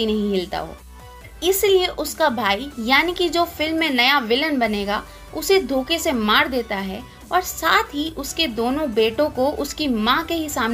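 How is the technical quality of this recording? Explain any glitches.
No technical faults can be heard in this recording. There are no glitches to explain.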